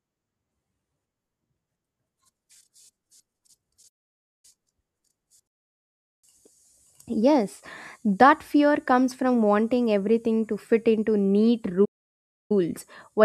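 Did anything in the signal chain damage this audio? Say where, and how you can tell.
Yes. The damage points to the playback stage. The speech drops to silence twice in mid-flow, from 3.88 to 4.45 s and from 11.85 to 12.52 s. These gaps last about 0.56 s and 0.65 s. They are too long and abrupt to be natural pauses. This is a playback stall. The likely cause is a player that ran out of buffered data, or a blocked audio thread, leaving nothing to output until it recovered.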